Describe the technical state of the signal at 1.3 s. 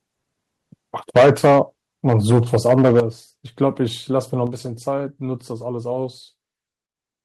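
The signal clips from 1.16 to 1.59 s. Peaks overshoot full scale by about 11 dB, flattening roughly a fifth of the samples. The likely cause is microphone overload, with input gain too high for the converter. The loudest syllables crackle harshly.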